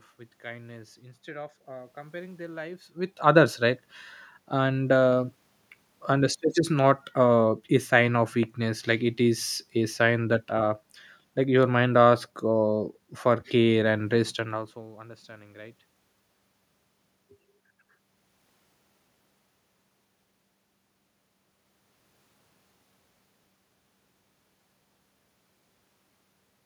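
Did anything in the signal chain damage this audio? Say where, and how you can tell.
No, nothing in the chain has damaged this speech; the level shifts around 2.5 s and 14.5 s come from the talker moving relative to the microphone, and the steady background is the room itself.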